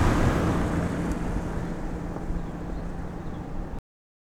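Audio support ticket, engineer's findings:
Cut-off end at 3.79 s: sound stops dead mid-event, straight to digital silence for the last ~0.43 s, no decay tail. Probable component: playback/write path. Final buffers never got written or played out, so the stream just truncates there.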